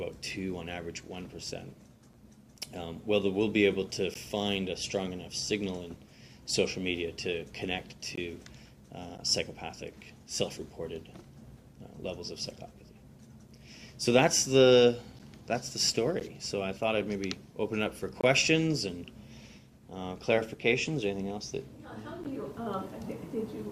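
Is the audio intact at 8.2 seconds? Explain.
No, not quite. Right around 8.16 s there's a gap between stream segments: the timestamps of two adjacent chunks don't line up, so the player pads roughly 19 ms of silence in between. You hear a brief, hard-edged dropout, though nothing actually goes missing. The spacing fits 1-second segments.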